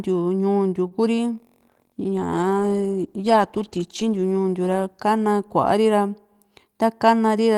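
Right near the start, from 0.87 to 0.93 s, there's a short stall from a late packet. The receiver ran dry and stretched the last bit of speech by 34 ms until the packet showed up, so nothing's lost, but that sound hangs a touch long.

Then at 1.70 s you get a call bitrate drop, from 40 kbps down to 15 kbps. It sits at the bottom for about 2.5 s, and the coarser coding plus trimmed highs make the speech go rough and a bit muffled until it clears at 6.06 s.

Finally, from 6.34 to 6.84 s, there's a jitter buffer speed-up. The receiver was sitting on too much audio, so it snipped out tiny pitch-period slices, around 50 ms in total. Playback runs at 109% with the pitch unchanged, so that stretch sounds slightly hurried.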